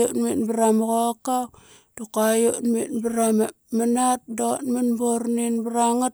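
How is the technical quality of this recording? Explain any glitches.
No glitches or faults detected.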